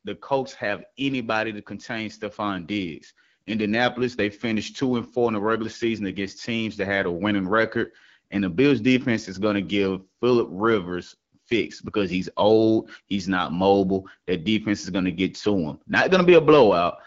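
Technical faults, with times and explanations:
Nothing in this speech clip registers as a technical fault. The AMR wideband (HD Voice) coding at 12.65 kbit/s keeps the speech clear, with only light coding colouration and the top band from 6.4 to 7 kHz filled in with shaped noise.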